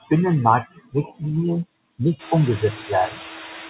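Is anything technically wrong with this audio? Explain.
Yes, there are two noise suppressor faults.

Noise suppressor artifacts run through the whole clip. The suppressor pulls down bands it judges to be steady noise frame by frame, so the background sinks by about 4 dB between phrases and comes back up under the speech.

Speech cut by the noise suppressor occurs between 0.75 and 1.22 s. The suppressor mistook parts of the speech for noise and dropped them by up to about 14 dB, roughly 150 ms in all, so those parts sound swallowed and faint.

The room noise rising at about 2 s and the cutoff at 4 kHz, which points to a narrowband call codec such as G.711, are not faults.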